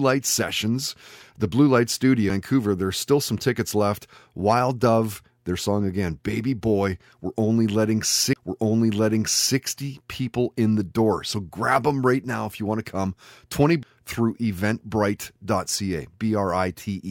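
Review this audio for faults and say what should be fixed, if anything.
A tick followed by an abrupt jump in the speech occurs at 2.30 s, at 8.33 to 8.36 s just before "people in the door", and at 13.83 s. These are CD skips. The laser jumped to another turn of the disc's spiral, so the player muted for a few milliseconds (roughly 20 ms at the middle event) and resumed from a different point. To prevent this, clean or replace the disc and shield the player from knocks during playback.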